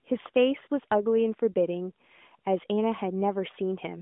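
Nothing stood out on listening to this speech clip, which comes through the narrowband mobile line at 12.2 kbps as expected.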